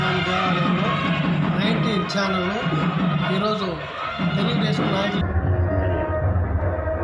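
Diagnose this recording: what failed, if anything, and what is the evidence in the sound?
From 5.21 s to the end, the sound drops a full octave (-12 semitones) and runs at half speed, with pitch and tempo falling together. This is a wrong sample rate fault at playback, which fits 44.1 kHz material clocked out at 22 kHz without conversion.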